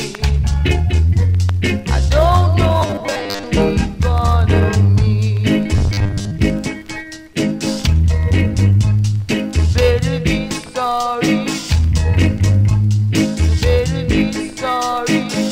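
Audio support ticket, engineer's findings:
Robotic sound from repeated short buffers, two spots. 2.81 to 3.43 s: rigid metallic buzz at 100 Hz, roughly half the audio there is repeats. 5.76 to 6.31 s: same 100 Hz buzz, most of the stretch repeated. Likely an underrunning playback buffer looping its last chunk, which fits about 10 ms per repeat, while the real audio gets skipped. The sound still loosely follows its original shape under the buzz.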